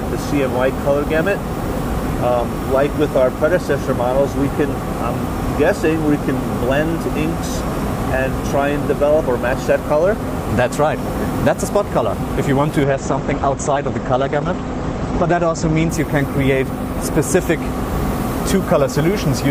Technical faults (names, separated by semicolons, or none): call bitrate drop